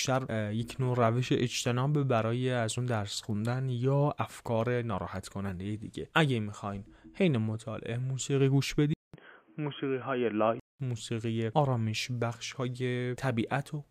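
At 8.94 s the input likely switched to a poorer device. After a 200 ms silence, everything above 3.3 kHz vanishes, so the sound turns dull and boxy, with a new noise floor about 35 dB below the signal at similar loudness, until it clears at 10.80 s.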